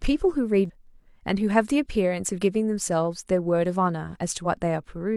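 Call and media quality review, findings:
Damaged data in a compressed stream at 0.65–0.70 s and 4.42–4.47 s: brief disturbances in the speech. Decoder loses sync.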